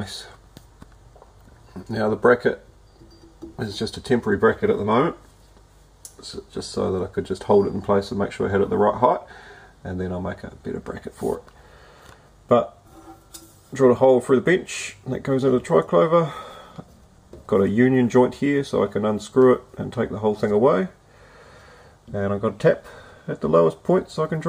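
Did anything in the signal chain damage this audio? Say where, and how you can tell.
No, nothing in the chain from capture to playback shows audible damage to this audio at any point.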